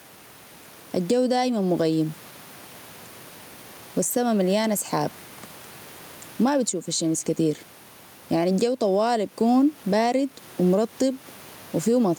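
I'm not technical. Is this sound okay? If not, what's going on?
No, not quite. There's gain pumping all the way through this speech clip. Every time the talking gets loud, the level gets pulled down. That's likely because the microphone level is set far too high and an automatic leveller keeps yanking it down. The swing is fairly big, so everything sounds squashed and flat.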